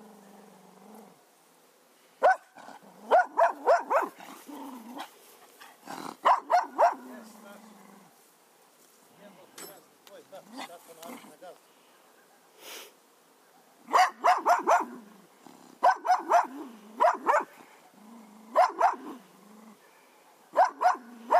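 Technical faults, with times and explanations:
No technical faults can be heard in this audio.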